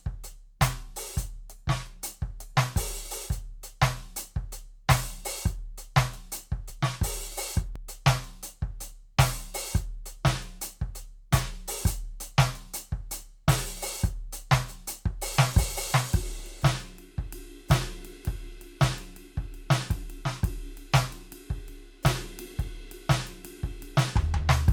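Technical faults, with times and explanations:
6.70 s and 7.76 s: dropped buffer (overrun). Each is a small forward jump in the music, skipping roughly 10 ms. There is no gap of silence. The likely cause is samples overwritten before capture, leaving the two sides butted together.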